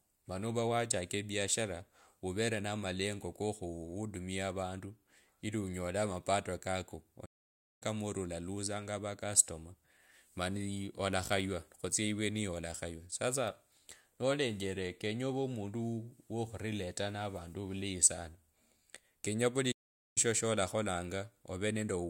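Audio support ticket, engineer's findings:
Speech cuts to dead silence mid-flow at 7.25–7.83 s (0.56 s gap) and 19.71–20.18 s (0.44 s gap), then resumes. Playback stall, likely the player buffer running dry or its audio thread being blocked, so output halts until data arrives.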